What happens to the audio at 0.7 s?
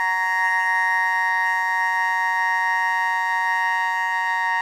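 At 0.7 s the music carries two faults that run through the whole clip, so nothing marks this moment out from the rest.

The first is overlap-add ripple. The level dips and recovers by about 11 dB at a rate of around 200 Hz, heard as a metallic buzz with extra tones around each note laid over everything. It comes from frames being recombined with overlapping windows whose gains don't add up to a constant, so loudness swells and sags once per frame. A slow tremolo or amplitude flutter from a mechanical source would pulse at a few hertz. This one is fast and perfectly regular, which makes it sound robotic rather than wavering.

The second is what sounds like generation loss. The music is smeared and swirly, with a hollow, phasey quality and blurred attacks. The likely cause is MP3 coding at 128 kbit/s applied repeatedly, perhaps around four passes, each requantising on a shifted frame grid so the noise and spectral holes accumulate. 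A single 128 kbit/s encode would mostly just trim the top end. Here the cloudiness and loss of transient detail go well beyond that.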